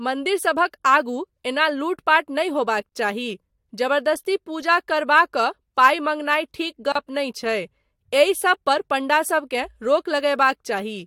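At 2.89 s and again at 6.92 s, just before "नहि छै", the speech drops out for about 30 ms and 32 ms. These are gaps at a join of encoded pieces, four seconds apart. The segments were encoded separately and concatenated untrimmed, so each join keeps one encoder's final-frame padding and the next encoder's start-up delay. Each gap is a short silence with smeared boundaries, after which the speech resumes where it stopped.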